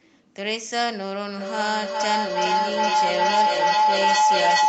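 Feedback howl runs from 1.38 s to the end: a growing mic-to-speaker loop rings near 1 kHz, pulsing about every 0.4 s, a bright spectrogram line about 8 dB above speech.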